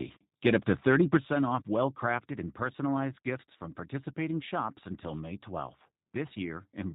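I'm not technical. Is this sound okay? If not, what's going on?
No. The call ran through the G.729 codec, a low-data phone-call format that rebuilds speech from a rough model and discards everything above 4 kHz. Throughout, the speech sounds muffled, slightly rough and synthetic, with a clearly audible processed quality.

From 0.45 to 1.17 s, just before "off well", the speech has a harsh, crackly edge. This is microphone overload, likely from the input volume being set too high, so the loudest moments exceeded what the recording hardware could capture and their tops were chopped off.

The microphone volume stepped down twice, probably because the call software judged the input too loud after that distortion. The first drop comes at 2.19 s, between "off well" and "and personalized", and the second at 3.3 s, between "and personalized" and "from participating shops until". Each time, voice and background suddenly get quieter.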